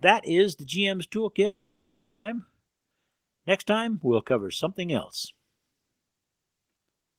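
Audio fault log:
1.45–2.27 s, long network dropout: sound smears into a fading buzz, then 0.69 s of silence, resuming with 0.8 s gone, likely lost network packets.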